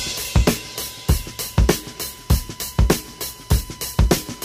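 A steady whine at 1 kHz sits under the audio for the whole clip. It is USB whine. It holds a fixed pitch and stays around 25 dB below the signal. The 1 kHz pitch matches the USB bus's 1 ms frame rate. Current drawn in step with those frames leaks into the audio path through shared power or ground. The tone is strongest at its 1 kHz fundamental.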